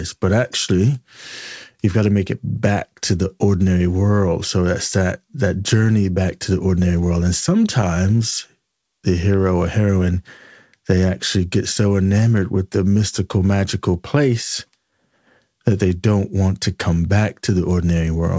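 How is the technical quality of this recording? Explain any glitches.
The speech is marred by small, uneven timing hiccups and a slightly dragging tempo. The audio stops at 8 kHz, consistent with the wideband call codec it passed through.

Clock drift between sender and receiver runs through the whole clip. The sender's audio clock runs about 2% slower than the receiver's, so the jitter buffer keeps draining. The receiver has to fill the gaps, which makes the pacing feel faintly stretched and unsteady rather than smoothly continuous.

Repeated timing corrections appear from 0.76 s to 17.96 s. To stay in step with the slow sender, the receiver repeatedly duplicates short pieces of audio, all in the same direction and at irregular spacing. Together they add roughly a third of a second and play the speech at about 98% speed, heard as scattered slight stutters.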